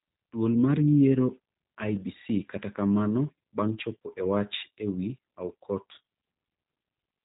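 Speech carries plainly audible G.729 codec damage from start to finish. The top of the spectrum is gone, with nothing above 4 kHz, so sibilants sound dull and clipped. Each stretch is rebuilt from a vocal-tract filter, a pitch predictor and a sparse set of pulses, which gives the speech a rough, slightly synthetic buzz, and any background sound warbles. The character fits an 8 kbit/s G.729A VoIP encode.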